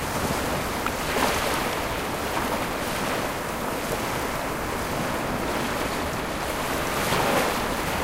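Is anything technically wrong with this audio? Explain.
Yes, there is one fault: a dropped buffer (overrun) at 0.93 s. The likely cause is that the capturing software did not read its block of samples before the hardware overwrote it, so a short piece, a few milliseconds, was lost and the audio on either side was joined end to end. There is no gap of silence. The sound skips forward abruptly at that moment.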